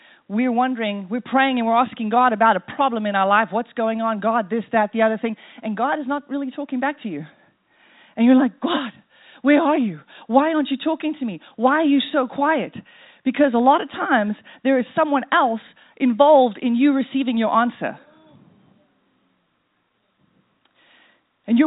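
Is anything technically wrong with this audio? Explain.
No, nothing technically wrong stood out on listening to this speech clip.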